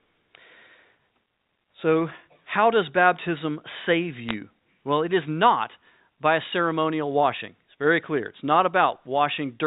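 Bits were flipped on the digital phone line from 4.29 to 4.34 s, right after "how does baptism save", at a low rate of roughly two in a thousand. Each bit error corrupts one sample of the G.711 mu-law stream, so single samples of the speech are disturbed briefly while its band-limited telephone sound stays unchanged.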